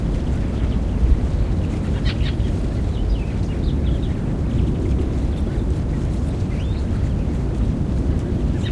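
No technical faults can be heard anywhere in this recording of sounds.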